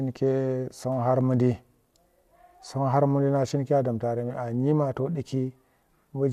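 No technical faults can be heard anywhere in this speech recording. There is nothing to flag at any point in the clip.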